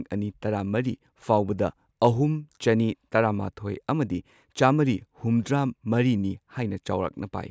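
Nothing stood out as a technical fault on listening to this speech recording.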